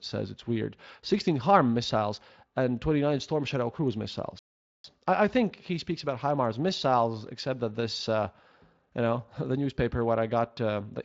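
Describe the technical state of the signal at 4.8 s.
A playback stall runs from 4.39 s to 4.84 s, so 4.8 s falls near its end. The output goes completely silent for about 452 ms, cutting the speech off mid-flow before it resumes with "I I think he". The likely cause is the player running dry of buffered data, or its audio thread being blocked, so nothing reached the output until it recovered. Through the gap, the Speex-coded speech simply drops out.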